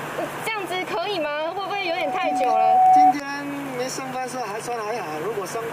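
A microphone picking up its own loudspeaker pushes the loop gain past one at 746 Hz, producing loudspeaker feedback squeal from 1.43 to 3.15 s: a single tone swelling over roughly a second and a half to about 15 dB above the sound.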